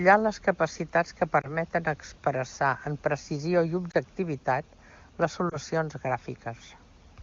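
Speech here has three brief dips or warbles, at 1.41–1.49 s, 3.91–3.95 s and 5.49–5.57 s. These are lost AMR speech frames, each a single 20 ms frame, where the decoder patched the gap by reusing the last good frame at reduced gain. The wideband codec sounds clean, which fits a high AMR-WB rate.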